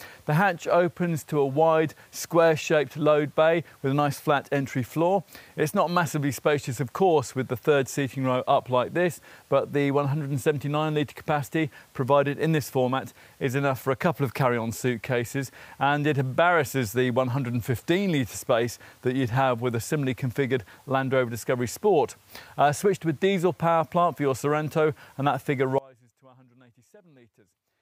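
An audio dropout to a faint residue begins at 25.78 s and runs to the end. The sound cuts abruptly to a faint leak roughly 30 dB down, likely from losing the source feed while the downstream path stayed live. The waveform collapses to a thin band, and the spectrogram dims suddenly to a pale trace.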